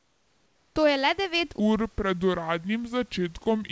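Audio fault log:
0.00–0.76 s, comfort noise in place of the background: For the first 0.76 s the room's natural background gives way to a steady, featureless hiss about 8 dB quieter than the real ambience. This is likely discontinuous transmission. The sender's voice detector heard no speech and stopped sending. The receiver then generated synthetic noise shaped only broadly like the room, so the background's texture and small variations disappear.
1.60–3.71 s, section at the wrong speed: Right after "je le devet", the rest of the audio plays at 0.725 times its recorded speed. Because speed and pitch move together, the speech suddenly drops by roughly five semitones and drags, sounding deeper and slower through to the end. The likely cause is this stretch being played or edited against the wrong clock, which stretches the audio instead of keeping its original timing.
3.44 s, sound dropped by the voice detector: Within the slowed section, a 20 ms sliver of speech vanishes and is briefly replaced by flat comfort noise before the audio returns. 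The likely cause is the voice detector treating a quiet moment of speech as background and stopping transmission for 20 ms. The receiver filled the gap with synthetic noise, so the speech shows a tiny dull blip rather than its real content.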